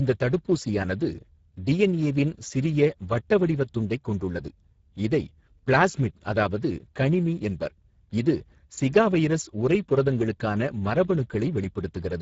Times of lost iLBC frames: none

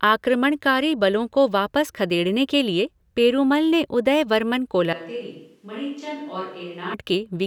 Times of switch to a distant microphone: 4.93-6.94

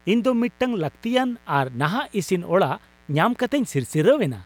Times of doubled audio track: none

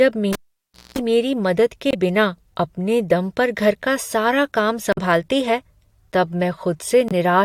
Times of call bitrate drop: none

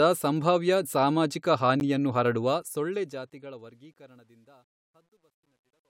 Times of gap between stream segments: 1.80

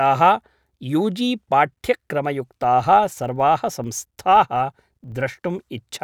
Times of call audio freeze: none

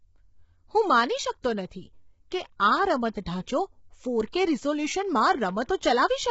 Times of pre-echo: 1.42-1.44

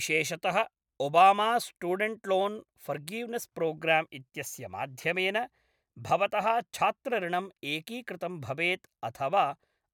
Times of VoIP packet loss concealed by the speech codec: none

